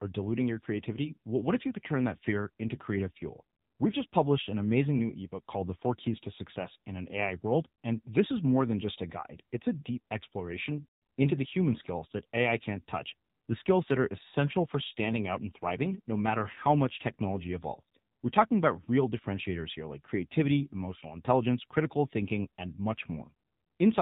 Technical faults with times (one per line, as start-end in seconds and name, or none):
0.00-24.01 AMR narrowband mobile codec